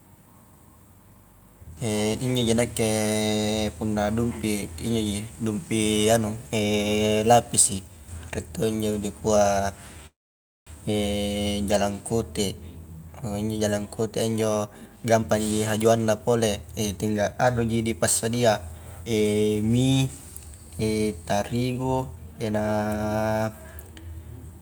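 A speech recording with a halt and three rushed stretches. Just after "to injo dikua", from 10.07 to 10.69 s, the sound hangs as a fading buzz and then sits silent for about 550 ms before resuming exactly where it stopped, with nothing lost. This call audio freeze was likely caused by delayed packets draining the jitter buffer, adding a 600 ms gap. After "injo jalangkotea", speech runs hurried at unchanged pitch from 14.32 to 17.84 s (109% speed, roughly 300 ms cut), 18.29 to 19.84 s (110%) and 21.61 to 22.68 s (111%), each of the latter trimming roughly 150 ms. That is jitter buffer speed-up, with the receiver shaving short pitch-period slices to shrink an overfull buffer.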